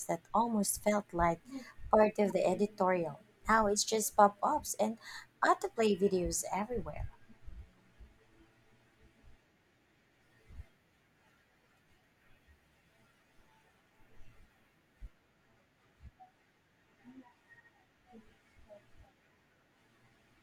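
At 2.30 s, between "felt like part of" and "the editorial", a corrupt frame was decoded: flipped bits in one compressed frame were played back as if valid, so misread gains and codes placed energy at the wrong frequencies for that frame's duration. It sounds like a brief chirp, squeak, blip or burst of noise over the speech. On a spectrogram it shows as a narrow vertical smear of misplaced energy, and the waveform shows a tiny disturbance peaking at about -40 dBFS.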